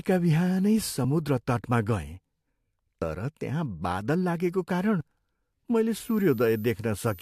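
At 1.04 s and 5.01 s, an overlap between stream segments trims a few milliseconds of speech at segment joins, which fits 2-second segments, leaving tiny skips. From 5.92 s to the end, a switching supply whistle sits between 13.9 and 14.2 kHz, roughly 25 dB below the speech, drifting slightly in pitch.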